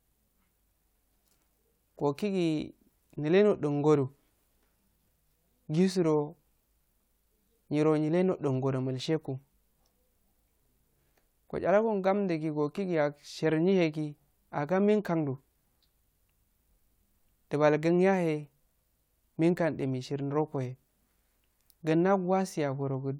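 No audible technical faults.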